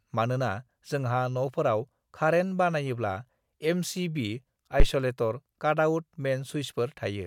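At 4.80 s a phantom power thump cuts into the speech and lasts until 4.87 s. A supply was switched on or off on the live input, and its voltage step passed through the coupling capacitors. It sounds like a deep thump peaking at about -9 dBFS and dying away within 16 ms.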